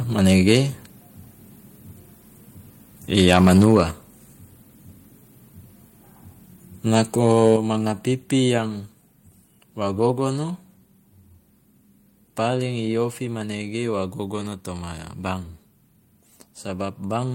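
From 7.27 to 7.51 s the loudest syllables take on a harsh, crackling edge, with peaks pushed about 1 dB past the converter's limit and a small fraction of samples flattened. This is microphone overload, likely from an input level set too high for the converter.

At 7.56 s, just after that distorted stretch, the speech and the background both drop by about 6 dB in a single step. This is the microphone volume being stepped down, likely by the call software reacting to the clipping it had just detected.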